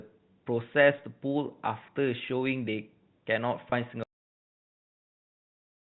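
At 3.70 to 3.72 s there is packet loss with pitch repetition. About 20 ms of speech, consistent with a single lost packet, is missing, and the receiver bridges it by repeating the last pitch period. The gap comes across as a brief held, buzzy tone.

At 4.03 s the clip has a cut-off end. The final buffers were never written or played out, so the speech halts mid-sound and drops straight to digital silence with no natural decay. Nothing returns, and the narrowband G.711 telephone sound, limited to 4 kHz, does not resume.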